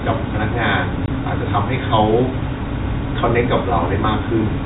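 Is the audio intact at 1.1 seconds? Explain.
No. Just before 1.1 seconds there is packet loss filled with silence, from 1.06 to 1.08 s. A 20 ms stretch of the speech never arrived, which points to a single lost packet, and the receiver inserted digital silence in its place instead of concealing the gap. The speech drops out abruptly for that instant, with hard edges at each end of the hole against the narrowband telephone-coded sound.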